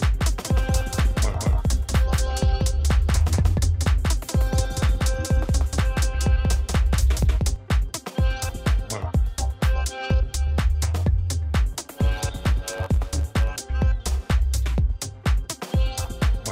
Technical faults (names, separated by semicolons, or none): doubled audio track; block size mismatch (truncated)